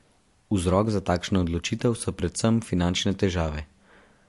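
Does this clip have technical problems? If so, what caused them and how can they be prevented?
Yes. Throughout the speech the treble stops at 11.3 kHz with plainly audible swirly artefacts, likely MP3 compression at a bitrate around 53 kbps. To prevent it, encode at a higher bitrate or keep a lossless copy.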